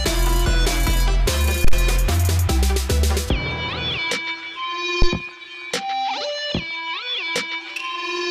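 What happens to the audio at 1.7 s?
A deep, dull thump hits at 1.64 s, peaking at about -5 dBFS and dying away within roughly 28 ms, with the disturbance over by 1.77 s. This is a phantom power thump. When phantom power or another supply is switched on or off while the input is live, the sudden DC step passes through the coupling capacitors as a low-frequency pulse. The audio receives it as a short, heavy knock that decays quickly.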